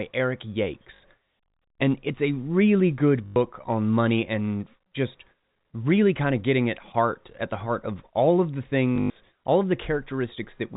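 Speech over a telephone-band channel, with packet loss and the last packet repeated. Short robotic stutters sit at 0.96 s, 3.26 to 3.36 s and 8.96 to 9.16 s. The receiver replays old audio until new packets arrive. The runs buzz at the packet rate. The last burst loses 160 ms in total, with its longest run 100 ms.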